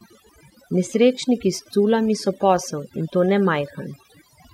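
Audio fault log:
throughout, overdone noise removal: noise reduction set far too aggressively clamps individual frequency bands down or out whenever they sit near the estimated noise floor, taking quieter speech components along with them, so the background drops and breaks up into twinkling specks.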